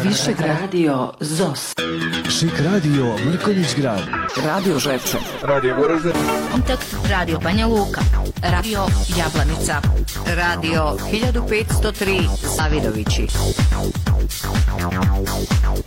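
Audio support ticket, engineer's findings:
Compressed frames skipped at 6.51–6.56 s, 8.55–8.65 s and 12.59–12.62 s. Each time the audio jumps forward by around a tenth of a second. Probable component: decoder input, with frames missing from the stream or rejected as corrupt and dropped whole. Fixed skip size matches whole-frame loss.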